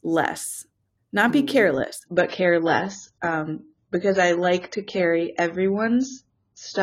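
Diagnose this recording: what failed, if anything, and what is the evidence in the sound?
Network stage: adaptive stream at a lower bitrate. From 2.06 s, after "not be mm careless", everything above 7 kHz suddenly vanishes. That fits a low-rate AAC switch.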